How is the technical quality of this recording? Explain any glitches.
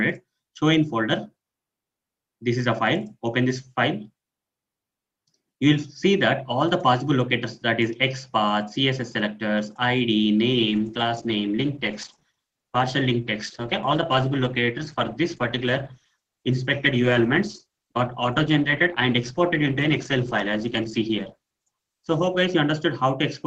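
Quality degrades for one stretch. From 10.53 to 22.53 s the audio switches abruptly, without a gap, to an adaptive stream at a lower bitrate, consistent with roughly 64 to 16 kbit/s Opus: codec artefacts thicken.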